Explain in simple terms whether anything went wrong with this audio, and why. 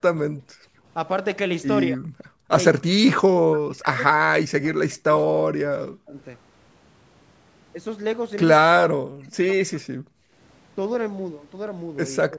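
Yes, two things went wrong. Speech suppressed in double talk is heard at 0.0 to 0.56 s, 1.92 to 2.07 s, 2.48 to 6.15 s, 8.61 to 10.01 s and 12.21 s to the end: the voice sinks or vanishes in patches, likely because the echo canceller ducked it while the other side talked.

Background gated by the echo canceller is briefer, at 2.36 to 2.48 s and 10.29 to 10.34 s. Here the room sound, not the voice, blinks out for a moment.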